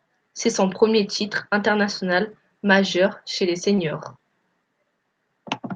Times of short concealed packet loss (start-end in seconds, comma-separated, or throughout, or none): 3.75-3.79